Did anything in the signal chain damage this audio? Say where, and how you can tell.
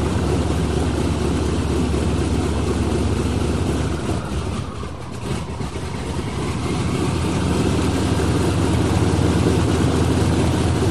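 Yes: likely analogue-wiring interference causes a train of clicks at 9.29–10.65 s, roughly ten uneven pops near six per second, about 10 dB above the sound.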